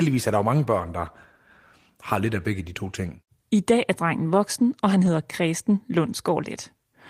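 At 5.05 to 5.07 s, a single packet of this speech was lost and replaced by a lost packet rebuilt from error correction: the following packet carried a low-bitrate copy, and the decoder played that 20 ms copy in its place. There is no silence and no smeared, repeated tail as with guessed concealment. Instead there is a brief patch of rougher, noisier texture that still follows the surrounding sound.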